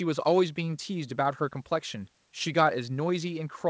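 No technical faults can be heard in this speech clip, which carries the band limit of a wideband call with nothing above 8 kHz, consistent with a codec such as G.722 and the call's microphone processing.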